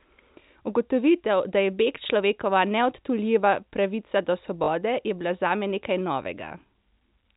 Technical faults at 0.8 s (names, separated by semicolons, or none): none